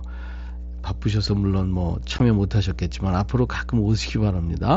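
Mains hum runs through the whole speech recording as a steady 60 Hz tone, loud at roughly 10 dB below the speech. A ground loop or nearby transformer is leaking the power line into the signal. On a spectrogram it shows as an unbroken horizontal line at 60 Hz with low harmonics above it.

At 2.19 s there is unconcealed Bluetooth headset packet loss. About 15 ms of audio, which fits two dropped headset packets, went missing between headset and phone and was replaced rather than smoothed over. It sounds like a brief abrupt-edged gap. The waveform shows a sharp-walled hole, and the spectrogram shows a thin vertical break across the wideband mSBC speech band up to 8 kHz.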